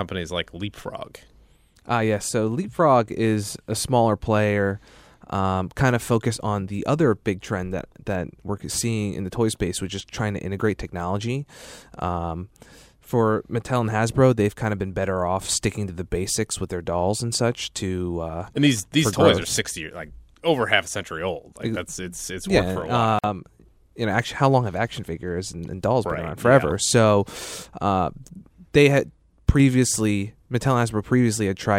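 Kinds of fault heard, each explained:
Gap at a join of encoded pieces: the speech stops dead for about 48 ms, from 23.19 to 23.24 s, then resumes exactly where it left off. Untrimmed encoder start delay and last-frame padding at a splice leave this silence, its edges smeared by the codec.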